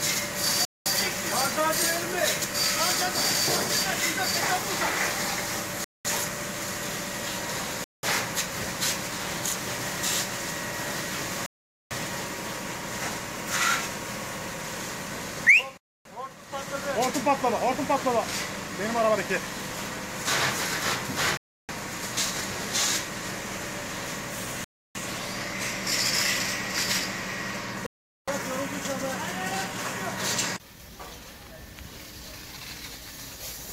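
The sound cuts to silence eight times: at 0.65, 5.84, 7.84, 11.46, 15.77, 21.37, 24.64 and 27.86 s. Each gap lasts 0.19 to 0.45 s. These are likely Bluetooth stalls. Delayed packets emptied the headphones' buffer. Playback paused until resent data arrived.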